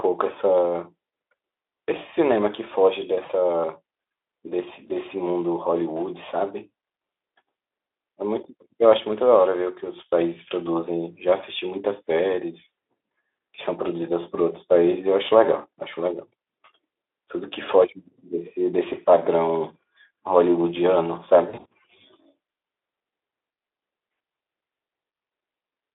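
At 3.25–3.32 s, 18.89–18.93 s and 21.50–21.66 s, VoIP packet loss concealed by the speech codec makes the narrowband Speex sound briefly smear into a fading buzz or coloured noise. The decoder repeats its last pitch and filter. The spectrogram shows smeared, flattened harmonics, and the waveform shows decaying amplitude. The third event has scattered gaps, the longest about 60 ms.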